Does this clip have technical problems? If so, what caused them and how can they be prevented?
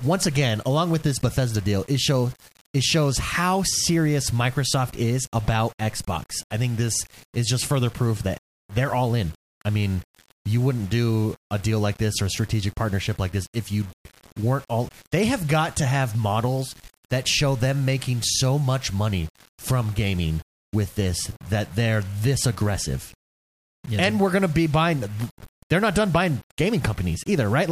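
Yes. Throughout the speech, quiet passages sound gritty with grainy, signal-following distortion, likely from low bit depth without dither, which fits 7-bit rounding with error around 25 dB below the signal. The waveform would show visible stair-steps, and a spectrogram would show noise that appears and fades with the speech rather than a steady floor. Prevent it by keeping a higher bit depth and applying dither before any word-length reduction.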